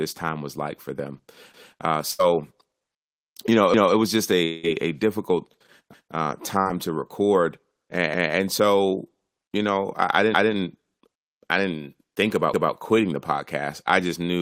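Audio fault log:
1.54–1.74 s, 5.94–6.14 s and 12.54–12.74 s, overlapping chunks: at each of these joins about 200 ms of audio plays twice, heard as a little stutter or click. The first comes right after "was like for them", and the last sits between "I didn't think" and "quitting the podcast I". Each new chunk starts 200 ms before the previous one finished, so that slice of sound gets played a second time. That points to 2-second processing chunks with an overlap that was never trimmed.
2.11–2.21 s, burst of packet loss: roughly 80 ms of audio is missing here. In its place there's about 75 ms of the preceding sound held on and fading out, which comes across as a brief buzz or hiss before the audio picks up again a little further along. The receiver had nothing to play for that short run, so it stretched the last bit it had and turned it down until real audio turned up again.
4.45–4.65 s, long network dropout: about 180 ms of audio is gone, and the gap is filled with roughly 183 ms of the last sound carried on as a fading buzz or hiss. 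It never drops to full silence before the audio comes back, further along than where it left off. The likely cause is a network stall: the receiver ran out of incoming audio and kept extending what it had until the stream resumed.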